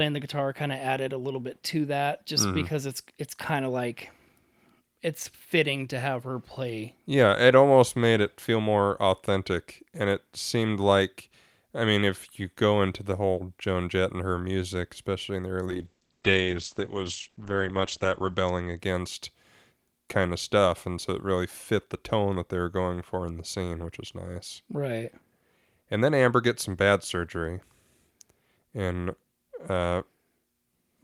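From 15.69 to 18.85 s a call bitrate drop takes the rate from 48 to 13 kbps for about 2.7 s, narrowing bandwidth from 20 kHz to 8 kHz, so the speech sounds muffled and coarse.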